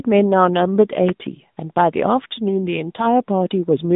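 From start to finish the speech has passed through an AMR narrowband mobile codec: nothing above 3.8 kHz survives, and the plainly buzzy, synthetic texture fits a mid-rate setting around 10.2 kbps.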